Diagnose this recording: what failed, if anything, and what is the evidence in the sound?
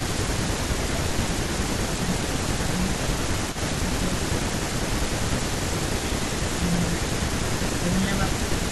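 Echo leak, call processing: a delayed copy trails the speech by 273 ms, about 15 dB down, at 0.0–2.12 s and 2.84–5.73 s. This is likely incomplete echo cancellation.

Speech suppressed in double talk, call processing: the level dips by up to roughly 10 dB at 0.09–3.1, 3.64–3.73, 4.31–5.8, 6.36–7.1 and 7.8–8.69 s, likely from canceller over-suppression.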